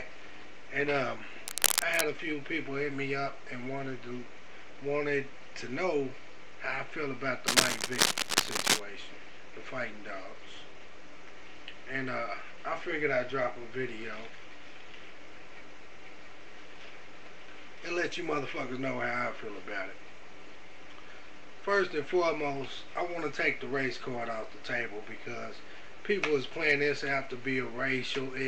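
At 1.48 s a burst of cable scratch noise cuts in and lasts to 2.01 s. A second burst runs from 7.47 s to 8.81 s. Both are dense, ragged scratching and rustling, a little louder than the sound underneath. The likely cause is a worn cable, connector or control being moved. Its contact resistance jumps about quickly. Each jump adds uneven crackle on top of the signal.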